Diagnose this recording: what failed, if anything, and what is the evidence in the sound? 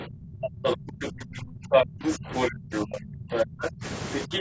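The call's echo canceller likely mishandled double talk, ducking the speech by up to about 35 dB across roughly three seconds between 0.0 and 3.84 s, with another brief dip of about 15 dB at 4.26–4.32 s.

In the same call-processing stage, the other side's voice was likely leaking through from the loudspeaker, heard about 5 to 15 dB below the talker at 0.64–1.07, 1.71–2.98, 3.32–3.70 and 4.13 s onward.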